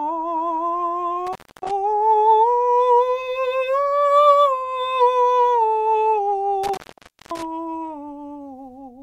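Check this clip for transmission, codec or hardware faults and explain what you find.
The music has an intermittent contact fault, twice. From 1.27 to 1.71 s, and from 6.63 to 7.45 s, a loose plug or cable briefly breaks the signal path. The music drops out for about 270 ms, then about 540 ms. Crackle marks each edge, with faint hiss in the gap.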